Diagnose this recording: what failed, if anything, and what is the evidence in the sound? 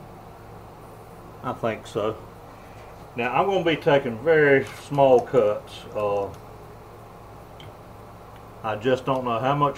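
Nothing failed: there is no fault to diagnose, and nothing in the sound points to any stage going wrong.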